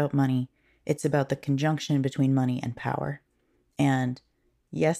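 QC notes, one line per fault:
No faults found in this speech recording.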